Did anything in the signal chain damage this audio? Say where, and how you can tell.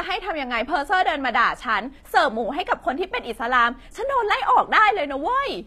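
Yes, in the codec: s sounds turn gritty and metallic throughout, likely HE-AAC compression near 24 kbps. A spectrogram shows copied-up treble bands ending sharply at 14.9 kHz.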